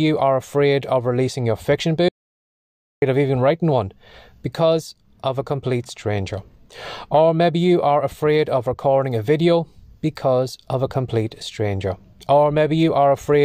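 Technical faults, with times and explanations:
2.09–3.02 s, audio dropout to silence: the input signal was likely lost upstream while the recorder kept writing zeros. The speech cuts off mid-flow into silence with no room tone, then resumes abruptly. About 0.93 s of speech is missing.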